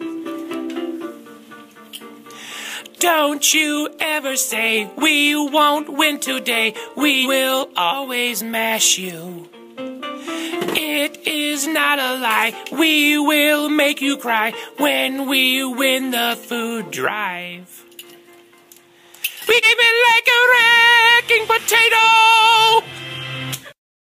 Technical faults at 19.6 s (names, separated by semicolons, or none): compressed frames skipped